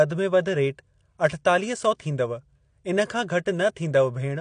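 AAC compression runs through the whole clip: the speech has nothing above about 10 kHz and sounds dull and smeared, with a fizzy warble on sibilants. Low-bitrate AAC-LC coding, likely near 32 kbps, would explain this, lowering the cut-off and starving bands of bits.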